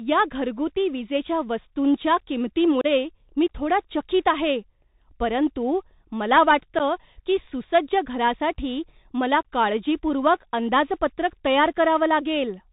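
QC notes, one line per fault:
throughout: Bluetooth CVSD headset codec. The speech is narrowband, with nothing above 4 kHz. A granular hiss runs under it, sibilants turn scratchy and loud bright syllables distort. CVSD sends one up-or-down bit per sample at 64 kHz, and its adapting step cannot keep pace with fast, loud high-frequency movement.
2.81–2.86 s and 6.79–6.81 s: unconcealed Bluetooth headset packet loss. Brief abrupt holes open and the speech resumes quieter for a moment. The first is about 30 ms, just before "मी थोडा चकीत आहे". The second is about 11 ms, between "चकीत आहे परंतु मला" and "की सुसज्ज घरासाठी मला". Both fit several short headset packets being replaced by silence or an idle pattern.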